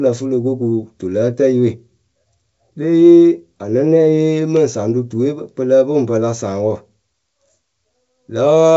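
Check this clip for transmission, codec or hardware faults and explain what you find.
No faults detected in transmission.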